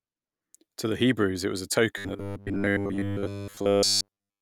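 From 1.98 s to the end at 4.42 s, the speech collapses into a rigid, metallic buzz pitched at 100 Hz, still tracing the rough shape of the words but with the natural voice gone. This is robotic sound from repeated short buffers. The likely cause is fresh audio arriving too seldom, so a roughly 10 ms slice is replayed over and over to fill the gaps, covering most of the stretch and imposing that fixed 100 Hz tone.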